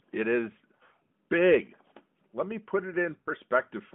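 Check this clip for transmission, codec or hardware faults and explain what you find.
There is one transmission fault, heard twice, over a narrowband mobile line. Lost AMR speech frames at 0.76–1.02 s and 3.20–3.28 s: the decoder repeats the last good settings at fading gain, producing brief dips or warbles.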